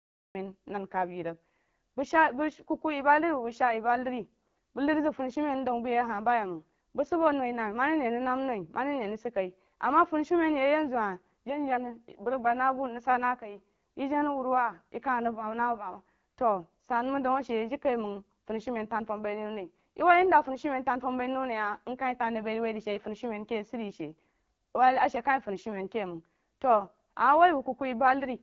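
Right at the top there's a cut-off start: the clip sits in digital silence until 0.35 s, then jumps straight into the middle of the speech with no natural attack or fade-in. The recording or stream simply began late, so the opening sound is chopped.

All the way through you can hear the AMR wideband (HD Voice) codec, and it's plainly damaging the speech. The voice has that rough, raspy edge and nothing comes through above 7.2 kHz; it's running at one of AMR-WB's lowest rates, around 8.85 kbit/s.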